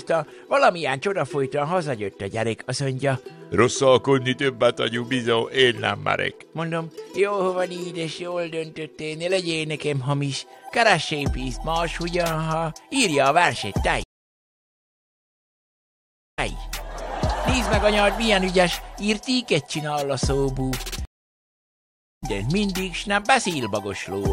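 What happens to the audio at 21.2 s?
At 21.2 s the player is in the middle of a stream reconnect. The connection dropped at 21.05 s, the player stopped producing output, re-established the link and started a new decoder partway into the stream. That leaves about 1.17 s of silence until 22.24 s. When the sound returns it has skipped forward by roughly a second, so material is missing rather than delayed, and its first instant comes in muted or faded as the fresh decoder settles.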